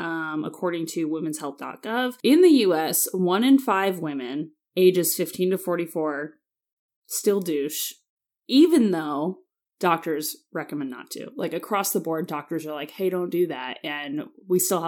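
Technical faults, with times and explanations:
No technical faults are audible.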